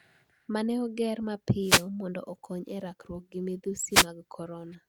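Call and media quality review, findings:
Wireless microphone noise hit at 1.61–1.86 s, after "ne oger", and 3.90–4.07 s, after "okony e rakruok gi": short static bursts. FM link fading as reflections cancel, so receiver noise rises. Check the RF path.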